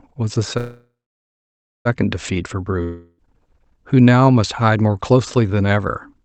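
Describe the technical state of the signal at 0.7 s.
At 0.7 s the signal is inside a call audio freeze spanning 0.57 to 1.87 s, likely from a jitter buffer running empty. The last sound is stretched into a fading buzz or hiss, then roughly 0.9 s of silence. On a spectrogram, smeared horizontal bands decay into a blank region. After the freeze, the sound resumes intact but about 1.3 s late.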